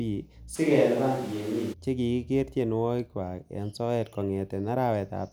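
From 0.57 to 1.72 s the speech abruptly turns roomy and thin at roughly unchanged level, with room noise about 25 dB below it, likely a switch to a distant microphone.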